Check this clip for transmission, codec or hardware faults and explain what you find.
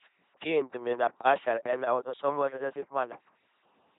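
The whole clip has been passed through an LPC-10 vocoder, and the damage is heavy. Each short frame is rebuilt from a ten-pole vocal tract filter driven either by a pulse train or by noise, never a mix, so the speech comes out as a buzzing, mechanical robot voice, with stray buzz or hiss where the voiced/unvoiced choice goes wrong. The heavy damage fits a 2.4 kbit/s coder. A spectrogram shows evenly spaced harmonic stripes or flat noise blocks switching frame by frame, with nothing above 3.8 kHz.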